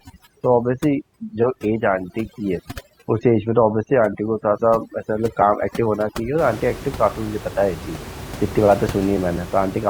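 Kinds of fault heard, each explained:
Overdone noise removal, 0.00 to 6.38 s: a noise reduction stage set too aggressively pushes individual frequency bands down or off whenever they sit close to its noise estimate. The room noise, only about 14 dB below the speech, drops and breaks up into twinkling specks. Softer parts of the speech fall under that threshold as well and are stripped away.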